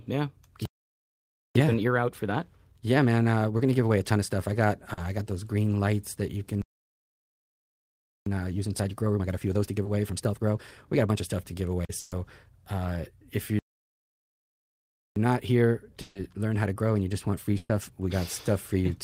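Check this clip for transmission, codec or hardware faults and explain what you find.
The clip has repeated network and playback faults: three stalls, each followed by hurried catch-up, plus several short and longer packet losses.

Playback stall at 0.65–1.55 s, 6.62–8.26 s and 13.59–15.16 s. The player was likely starved of data, so the speech stops dead for 0.9 s, 1.65 s and 1.57 s before resuming.

Time-compressed catch-up at 1.55–4.55 s (1.25×), 8.26–11.26 s (1.5×) and 15.16–18.16 s (1.25×). The player trims its backlog by splicing out small slices, so speech rushes at normal pitch.

Short concealed packet loss at 3.57–3.61 s (20 ms), 4.93–4.99 s (40 ms) and 9.83–9.87 s (20 ms). The decoder extended the preceding sound over each gap, heard as a brief smear or wobble.

Burst of packet loss at 11.99–12.13 s (120 ms), 16.01–16.17 s (140 ms) and 17.57–17.71 s (120 ms). Several consecutive packets were lost. 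Each gap was filled with a fading continuation, so a held buzz or hiss replaces the missing speech. The last burst ends in about 20 ms of silence.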